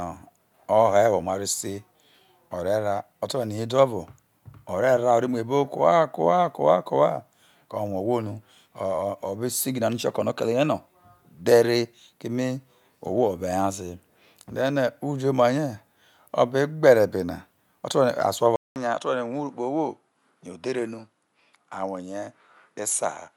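Input switched to a poorer device at 18.56 s, running to the end of the clip: after a 200 ms gap in the speech, the sound returns duller and a little quieter, with nothing above 11.4 kHz and a faint new background noise well below the voice. The likely cause is the recording path changing mid-take to a different microphone or a headset's call profile, whose narrower band, own tonal colour and lower level replace the original capture.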